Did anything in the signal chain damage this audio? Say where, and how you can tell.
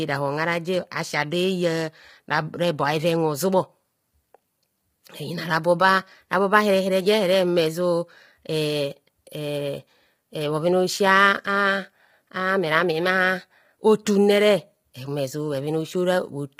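Yes, at the codec: likely low-delay AAC compression near 24 kbps. Its short frames blur pitch harmonics, leaving the speech rough and grainy throughout.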